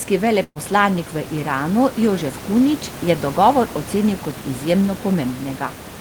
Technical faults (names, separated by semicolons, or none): burst of packet loss